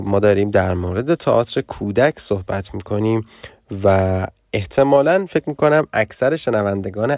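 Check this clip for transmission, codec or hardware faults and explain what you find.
Listening through the speech, I hear nothing that points to a transmission, codec or hardware fault: the signal holds steady with no breaks, glitches or level disturbances.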